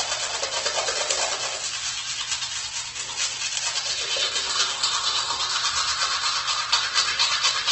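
Throughout, the audio was likely squeezed through Opus compression at a very low rate, consistent with about 12 kbps in its CELT music mode. Starved bands are refilled with folded or noise content, so tones turn grainy and rough, and nothing survives above 8.2 kHz.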